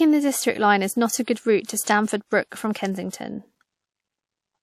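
Right after "not a good route" at 1.65 s, and again after "a good route to" at 1.83 s, there's pre-echo: roughly 35 ms of codec noise smeared ahead of each attack.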